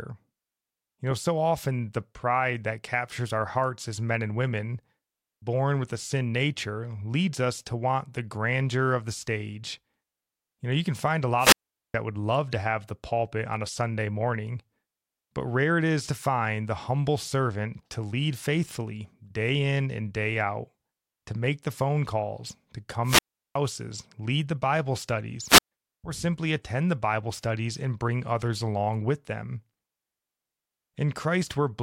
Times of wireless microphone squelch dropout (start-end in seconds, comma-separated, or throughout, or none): 11.37-11.94, 23.03-23.57, 25.45-25.72